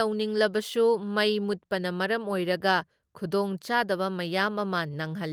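Nothing goes wrong anywhere in this bit of speech, so there's no technical fault to point to at any moment.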